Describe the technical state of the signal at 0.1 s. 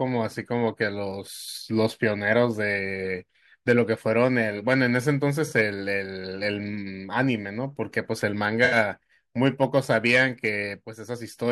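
At 0.1 s the speech signal is intact, with no technical fault at that moment.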